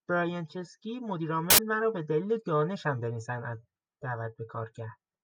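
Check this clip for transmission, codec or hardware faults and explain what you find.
One fault: from 1.50 to 1.58 s, samples built from the wrong bytes. Misassembled bytes promote noisy low bits, giving a loud, harsh broadband noise burst rather than a dropout's silence or a click's single spike.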